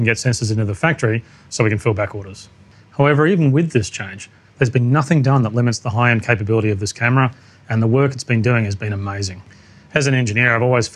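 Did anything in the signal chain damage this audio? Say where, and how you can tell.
No, nothing audible in this audio points to damage at any stage of the signal chain.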